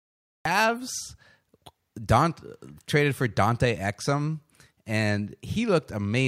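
The clip opens with a cut-off start: dead digital silence until 0.45 s, then the speech jumps in mid-sound with no attack, because capture began late.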